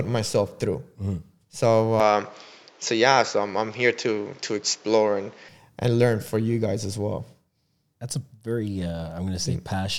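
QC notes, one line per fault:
2.00–5.49 s: input switched to a poorer device. Speech turns dull and capped at 7.6 kHz, with new background noise roughly 30 dB down and the level about the same. That's likely a mid-recording switch to a narrower-band mic, with no gap at the changeover.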